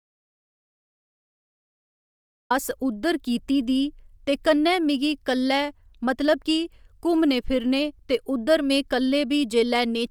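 The clip opens in dead silence with no room tone at all, and the speech only arrives at 2.50 s. This is an audio dropout to silence, likely from a lost input or link, with the recorder writing silence until the signal returned.

Throughout the speech there is a plainly audible grainy, breathy edge on the upper frequencies, with nothing above about 20.2 kHz. This points to Bluetooth LC3 compression, likely at around 48 kbps with 10 ms frames, where noise fills the thinned upper spectrum.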